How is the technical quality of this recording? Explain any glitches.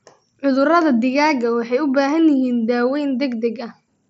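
Nothing here counts as a glitch: it's speech carried over a Bluetooth mSBC headset link, and that wideband path is doing just what it should all the way along.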